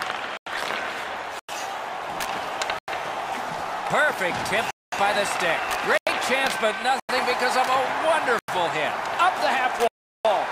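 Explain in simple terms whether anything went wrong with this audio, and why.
Blocks of digital silence cut the sound to complete nothing at 0.37, 1.39, 2.79, 5.98, 7.00 and 8.39 s for about 0.09 s each, at 4.71 s for 0.22 s, and at 9.88 s for 0.37 s. The program likely failed to deliver audio in time. Unlike a fade or a muffled patch, each gap is true silence that cuts out and back abruptly.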